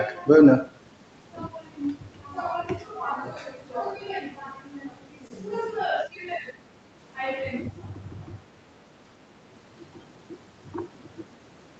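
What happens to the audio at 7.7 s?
Between 7.68 and 7.83 s the speech dips by about 10 dB, likely speech suppressed in double talk: an echo canceller mistook overlapping talk for echo and turned both down. Unlike a packet-loss dropout, this is the canceller turning the level down, not audio lost in transit.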